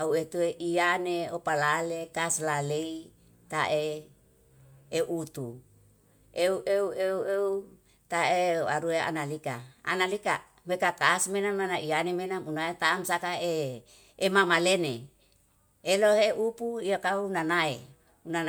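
Speech clip, no technical faults.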